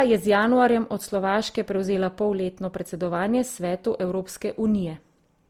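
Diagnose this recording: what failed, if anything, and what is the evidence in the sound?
Generation loss runs through the whole clip at the codec stage: the speech sounds swirly, smeared and hollow, with softened consonant attacks, worse than a single Opus pass near 48 kbit/s would explain. This likely comes from about four encoding passes, each quantising on a shifted frame grid, so the noise compounds.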